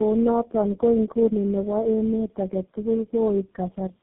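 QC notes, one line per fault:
Throughout: tandem speech coding. The speech passed through three low-rate speech codecs in sequence, with 64 kbit/s A-law links between them. Each border decoded the call and re-encoded it, so every coder modelled artefacts the previous one had left. The result is rougher, more muffled and more warbly than a single coder would make it, consistent with a chain such as AMR-NB, G.729A and finally GSM full rate. Nothing remains above 3.8 kHz.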